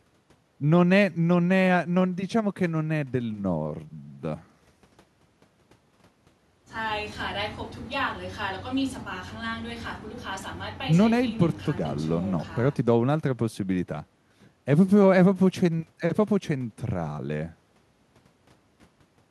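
No technical faults are audible.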